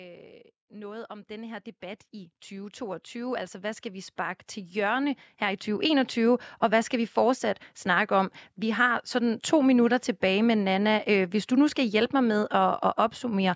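From 0.19 s to 6.18 s the speech and its background noise swell together, climbing by about 20 dB before "og hvad skal vi". This is automatic gain rising: the gain control judged the input too quiet and slowly turned its gain up.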